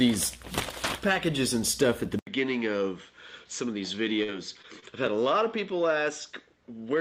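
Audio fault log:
2.19 s to end, input switched to a poorer device: after an 80 ms silence, the sound turns duller and a few dB quieter, with nothing above 7.5 kHz and a new faint noise floor far below the signal. This is likely a change of input device. A spectrogram shows a hard ceiling at 7.5 kHz from the gap onward, and the waveform drops in height after a brief flat stretch.
4.23 to 4.30 s, burst of packet loss: about 46 ms is bridged by stretching the last sound and fading it down, then playback jumps ahead, skipping 40 ms. It sounds like a short held buzz or hiss before a clipped restart. A spectrogram shows smeared, fading bands, and the waveform shows a decaying envelope then an abrupt resume.
4.62 to 4.65 s and 4.80 to 4.84 s, short concealed packet loss: fills of 14 ms and 25 ms each cover 20 ms of missing audio. These are brief smears or wobbles where the receiver continued the prior sound and blended back. 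A spectrogram shows short blurred patches.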